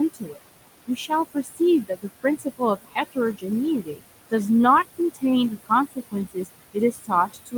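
Noise suppressor artifacts run through the whole recording. The suppressor pulls down the bands it judges to be steady background, by about 19 dB, and it re-decides frame by frame. The room noise, which sits about 14 dB below the speech, therefore drops away in the gaps and comes back up under each phrase.

The speech cut by the noise suppressor begins early, between 0.14 and 0.41 s. There the suppressor treats parts of the speech as noise, and about a fifth of a second of low-level detail is dropped by up to about 19 dB. From 0.87 to 3.44 s the same thing happens repeatedly, totalling roughly 0.7 s and reaching about 21 dB deep, so parts of the speech sound swallowed or faint. A shorter stretch at 3.82 to 4.33 s loses about 20 dB. From 5.66 s to the end, quieter passages are faded by up to about 16 dB.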